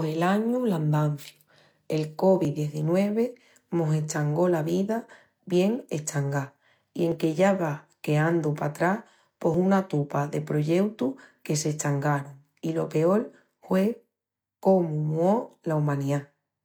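The capture side seems to have fallen behind the hardware four times, likely dropped buffers (overruns), each losing roughly 10 ms of speech. The two sides join directly without any gap, so each is heard as a jump in the sound: at 2.45 s, at 7.12 s after "vida bien eschangá i", at 9.54 s before "una tupa de proyeutus", and at 11.39 s just after "una tupa de proyeutus".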